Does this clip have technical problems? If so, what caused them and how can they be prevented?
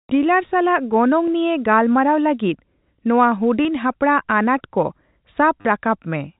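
Yes. Packet loss with last packet repeated causes a brief stutter at 3.63 s and a longer one from 5.61 to 5.65 s. The receiver replayed the previous packet to fill the gap. The longer run buzzes near 100 Hz, which fits 10 ms packets. That repetition, rather than silence, distinguishes it from a plain dropout. The band limit of the G.711 telephone coding can still be heard. Prevention: use a jitter buffer with proper concealment and forward error correction on a stabler network.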